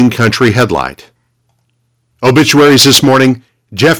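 It's a short speech clip with three stretches of hard, crackly distortion, from 0 to 0.86 s, 2.25 to 3.3 s and 3.82 to 3.93 s. That's likely microphone overload, with the input running about 9, 12 and 8 dB too hot so the peak tops get sheared off. Only a small share of samples are flattened in the first stretch, but about a fifth are in the second and nearly a third in the last. At 3.05 s everything, background included, drops by about 3 dB in one go, likely the microphone volume being stepped down by the call software reacting to that distortion. The level still isn't low enough, though, since the clipping carries on to 3.3 s and comes back at 3.82 s.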